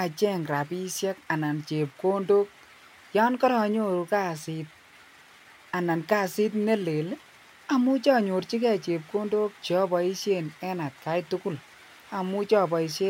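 A speech recording, and nothing in it stands out as a technical fault. There is no moment that needs a time stamp or a cause.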